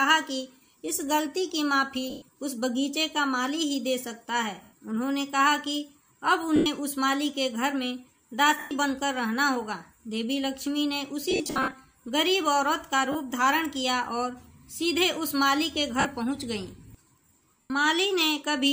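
Lost LE Audio frames occur at 2.10–2.22 s, 4.63–4.73 s, 6.56–6.66 s, 8.59–8.71 s, 11.31–11.73 s, 13.12–13.15 s, 16.00–16.05 s and 17.61–17.70 s. Gaps of 30 to 120 ms fit runs of 10 ms frames. The 11.31 s episode loses 250 ms scattered across 420 ms, with the longest run around 70 ms. For each missing frame the LC3 decoder repeats the last spectrum with random signs, so tones smear into a noisy wash that starts to fade after a few frames.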